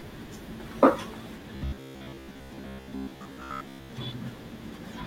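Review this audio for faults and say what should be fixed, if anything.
From 1.56 to 3.93 s the speech turns into a stiff, metallic buzz at about 67 Hz that still loosely tracks the words, which is the classic robotic sound from repeated short buffers. The likely cause is audio arriving too slowly, so the playback side keeps looping the last chunk of roughly 15 ms (one over 67 Hz) over most of that stretch while the real material gets skipped. Adding a deeper jitter buffer or fixing the upstream delivery timing should keep the stream fed and stop the repeats.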